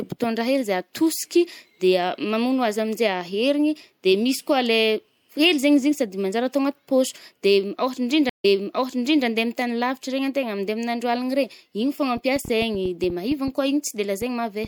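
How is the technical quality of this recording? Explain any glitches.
Two glitches stand out in this speech recording, both in the second half.

At 8.29 s there's a stream reconnect: the connection dropped, the player went quiet for about 144 ms, then restarted decoding and picked up roughly 0.82 s earlier, so you hear a short stretch repeated.

From 12.17 to 14.66 s there's a train of clicks, around fifteen uneven ticks at about 4.85 per second, poking out about 5 dB above the speech, likely from electrical interference or a faulty connection or power supply.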